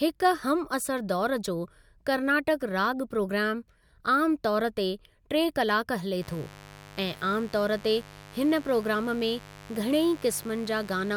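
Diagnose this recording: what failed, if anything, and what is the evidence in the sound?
The analogue wiring failed: a mains buzz appears at 6.22 s and runs to the end of the speech. It is a steady, raspy tone built on 50 Hz harmonics, roughly 20 dB below the speech, from switching spikes entering the signal path twice per mains cycle.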